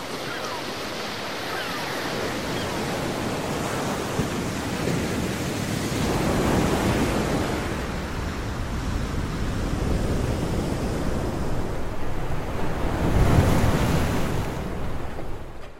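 No technical faults are audible.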